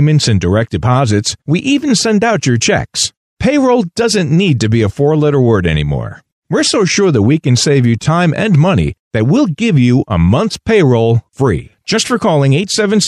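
A speech recording, and nothing is technically wrong with it.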